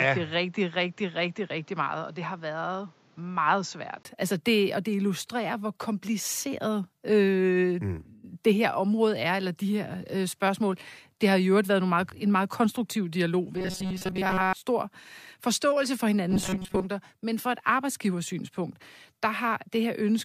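A speech recording in which the first 4.05 s sound duller and about 5 dB quieter than the rest, with a noise floor roughly 30 dB below the speech. A 20 ms gap marks the change at 4.05 s, after which the full band returns. This is likely an input switched to a poorer device, a narrower-band microphone or headset profile, that hands back to the main one. From 13.57 to 14.53 s, between "en meget konstruktiv dialog" and "stor forståelse for", and again from 16.30 to 16.87 s, after "stor forståelse for", the speech becomes a rigid metallic buzz at 188 Hz. Most of the audio in those spans is replaced, which points to robotic sound from repeated short buffers. The likely mechanism is starved input with the last segment of about 5.3 ms looped in place of the skipped audio.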